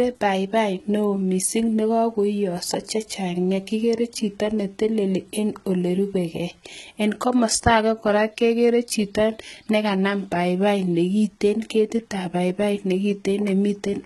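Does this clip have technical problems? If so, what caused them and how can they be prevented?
Yes. The speech was likely squeezed through HE-AAC compression at a very low bitrate, consistent with about 16 kbps. Band replication rebuilds the treble up to a hard 11.8 kHz ceiling, leaving sibilants gritty and heavily damaged throughout. Encoding at a higher bitrate with plain AAC, or a codec without band replication, prevents this.

Pre-echo appears from 2.86 to 2.88 s, just after "neo mising ne kagoiyoso": quantisation noise spread over the transform block smears about 21 ms of hiss before a sharp attack. A higher bitrate, or an encoder with good block switching that uses short windows on transients, prevents it.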